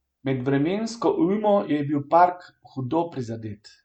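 Speech recording with no audible technical faults.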